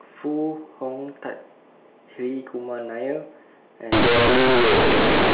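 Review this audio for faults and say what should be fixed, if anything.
From 3.92 s to the end at 5.34 s, the speech turns into very loud, buzzy distortion, with strong noise filling the pauses. This is companded audio read as linear. The A-law bytes are being played as plain 8-bit samples with no expansion. Every sign change swings the output across about half its range. Quiet passages come out as loud as peaks, and the waveform is bent badly. Before this point the A-law telephone band sounds as expected. To prevent it, make sure every A-law stream is decoded through the A-law expander before playback.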